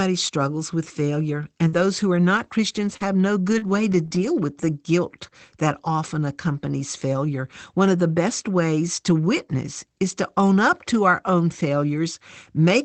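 Between 1.67 and 4.26 s, after "struggles with failure" and before "with the guilt that", there are scattered short gaps: about four brief dropouts, the longest around 50 ms, each patched by stretching the previous sound, so you hear small ticks and smeary hiccups.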